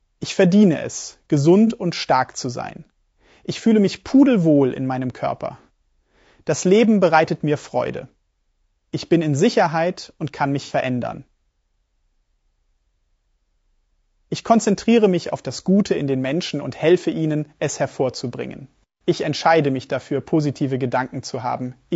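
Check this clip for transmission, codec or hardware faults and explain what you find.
Two faults are present: coding damage throughout, and two brief dropouts patched over by the decoder.

Throughout, the speech is rough and grainy, with noise between harmonics; this is likely low-delay AAC compression (AAC-ELD), which at low bitrates leaves too few bits for the harmonics, fitting a bitrate near 32 kbps.

AAC frame loss with concealment occurs at 1.67–1.72 s, after "verdiene es" and before "und stark zu sein", and at 10.64–10.73 s, after "und kann". The decoder rebuilt missing frames from the last good spectrum, leaving short smeared, noisy patches of about 30 ms and 60 ms. These fit one and two lost frames.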